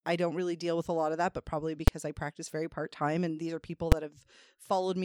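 Invalid numbers at full scale strike at 1.88 s and again at 3.92 s, each lasting about 6 ms, which fits a 256-sample processing block. In both places a calculation in the speech path returned infinite or undefined values, and these were forced to the largest value the format can hold, pinning the output at one extreme value, far beyond the speech peaks, for that block. Because the block is so brief, each event is heard as a single sharp bang cutting across the speech.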